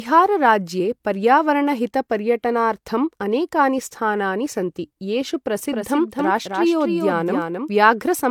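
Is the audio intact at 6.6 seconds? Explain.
No. From 5.71 to 7.69 s, right after "अनेकानि स्थानानि सन्ति येषु", there's a doubled audio track: a second, dry full-band copy trails about a third of a second behind at a few dB lower. It's likely an echo from a slower capture path or misaligned edit, and it starts and stops abruptly. The whole clip also shows low-bitrate audio saved at a high bitrate. It's a 193 kbit/s MP3 whose artefacts likely come from an earlier pass through a low-bitrate codec, something like HE-AAC around 48 kbit/s, which the re-encode can't undo.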